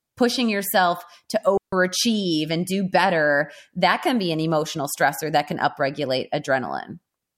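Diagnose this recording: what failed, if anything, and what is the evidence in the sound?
The digital wireless link failed. For a moment the receiver got too few valid data packets, so instead of passing corrupted audio it muted the output with a very fast fade. This is a digital wireless dropout. In the speech, right after "pushing yourself to", the signal drops to near silence from 1.57 to 1.73 s, a hole of about 151 ms. There is no click, hiss or noise burst on either side, only a clean gap where the audio is missing.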